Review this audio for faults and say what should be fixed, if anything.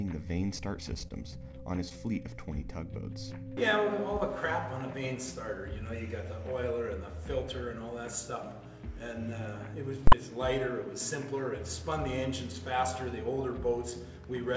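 Scattered short gaps run from 0.94 to 1.94 s. Around five small holes appear in the stream, each no longer than about 20 ms. The receiver bridged each one by extending the preceding sound, and that patched audio fills roughly 70 ms in total, or about 7% of that second. The result is a cluster of brief ticks and smeared hiccups over material that stays intelligible, heard through the G.722 call path with nothing above 8 kHz. Prevent this by fixing the packet loss or late delivery on the network, and give the jitter buffer enough depth to absorb the delays.

Invalid numbers at full scale occur from 10.07 to 10.12 s. A processing stage produced infinite or invalid values, and these were clamped to the maximum output level for one block of about 46 ms, which fits a 2048-sample processing block. Because the block is so short, it is heard as a single very loud bang rather than two separate pops. 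Prevent this by checking for non-finite values after every DSP stage and replacing them with silence before output.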